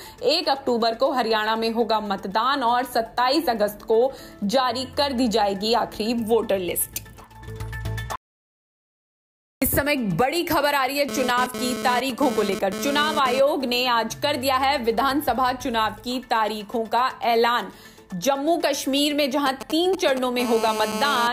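The audio drops to silence from 8.16 to 9.62 s, with no room tone at all, so about 1.46 s of material is simply gone. That's most likely a lost input, like a device dropping out or a stray mute, while the recorder kept writing silence. Then from 11.09 to 13.40 s there's GSM phone buzz: a harsh, raspy 217 Hz drone full of harmonics, sitting about 6 dB under the signal and flickering in and out the way a 2G handset does during a data transfer. The circuitry is rectifying those radio bursts. At 19.46 to 20.19 s you get GSM signalling bursts, that galloping dit-dit-dit of ticks and brief 217 Hz buzzes, something like 10 dB down. That's the phone sending only short groups of radio bursts. It then settles into a steady call-state GSM phone buzz from 20.40 to 21.28 s, again about 6 dB below the signal.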